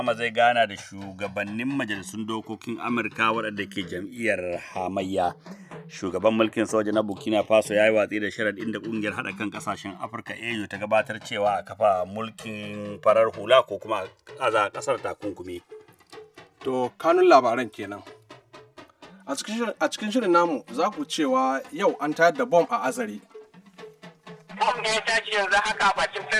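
A slow, swirling flanging runs through the whole clip, with a hollow, sweeping coloration that slides gradually through the spectrum. This is the two channels drifting apart: each side was captured on a separate clock, off from the other by a few hundred parts per million, so the delay between them creeps steadily upward, reaching around 5 ms by the end, and the comb notches it creates keep moving.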